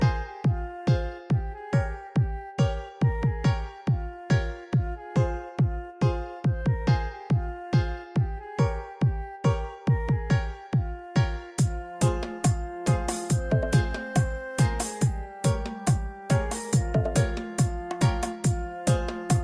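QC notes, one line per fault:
No faults found in this clip. Nothing here needs flagging at any point.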